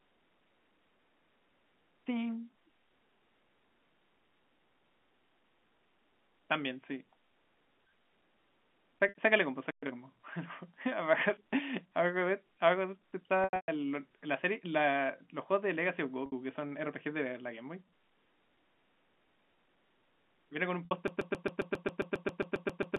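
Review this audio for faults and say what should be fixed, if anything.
Packet loss with pitch repetition occurs at 9.09 s, 13.44 to 13.68 s, 16.26 s and 20.85 s. The receiver bridged each gap by repeating the last pitch period and fading it out. The 60 ms gaps sound like a brief buzzy hold. At 13.44 s, 210 ms is lost in bursts over 240 ms, with a longest run of 120 ms, so the sound fades toward silence before returning. A larger jitter buffer or forward error correction would recover these losses.

A playback stall at 9.71 s silences the sound for 120 ms. The player likely ran out of buffered data or its output thread was blocked. The sound stops abruptly and resumes after the gap. Deeper buffering and keeping the audio thread free of blocking calls would prevent this.

Time-compressed catch-up follows the stall, from 9.83 to 9.95 s. The player clears its backlog at twice normal speed by cutting out and cross-fading small segments. 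This part sounds hurried but keeps its normal pitch. Avoiding the stall removes the need for this catch-up.

A broken-record loop runs from 21.08 s to the end of the clip. A 135 ms fragment repeats exactly, back to back, 14 times, and the audio that should have played there is lost. The cause is likely a stalled player, encoder or stream that kept resending the last fragment it held. A watchdog that detects the stall and outputs silence or reconnects would prevent the loop.

The G.711 A-law telephone path is working normally, with its expected narrow band of roughly 200 Hz to 3.4 kHz.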